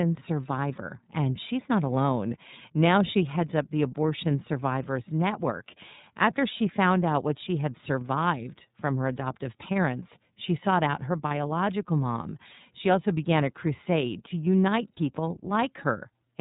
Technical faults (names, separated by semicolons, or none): iLBC codec; lost iLBC frames